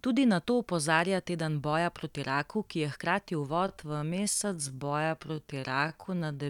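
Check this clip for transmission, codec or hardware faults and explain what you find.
One fault is audible: a time-stretched section from 3.5 s to the end at 6.5 s, right after "raku ki je hkrati". The speech slows abruptly to about 0.68 times its pace, likely from software stretching that repeats short slices to keep pitch, so the speech drags. Unlike a speed drop, the pitch stays put.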